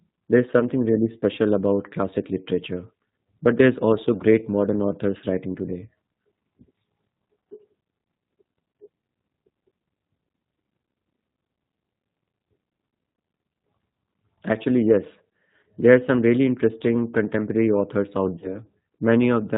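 Speech heard through the G.729 codec at 8 kbit/s. Its filter-and-pulse rebuilding leaves the sound plainly rough and synthetic, and a spectrogram shows a hard ceiling at 4 kHz with nothing above it. VoIP packet loss concealed by the speech codec appears at 0.60–0.64, 4.17–4.22, 8.72–8.75, 13.91–13.93, 15.61–15.64 and 18.39–18.58 s, where 10 to 30 ms of signal went missing. The decoder extended its last pitch and filter into a brief buzzy tone or coloured noise that fades. A spectrogram shows smeared, flattened harmonic bands there, and the waveform shows a sagging envelope that recovers only gradually.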